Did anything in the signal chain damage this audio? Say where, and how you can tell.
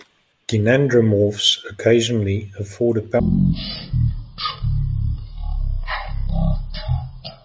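Yes, a wrong sample rate at playback: from 3.2 s, right after "occasionally afford a", the speech drops to one-third speed and about 19 semitones lower, consistent with 48 kHz audio played at 16 kHz.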